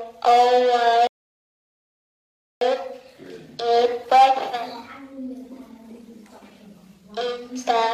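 At 1.07 s the audio stops dead and stays silent until 2.61 s, a rebuffering stall lasting about 1.54 s. The player ran out of downloaded data and paused until more arrived, then picked up exactly where it left off, so nothing is skipped but the timeline is stretched. On a waveform it shows as a flat gap with abrupt edges; on a spectrogram, a blank vertical band across all frequencies.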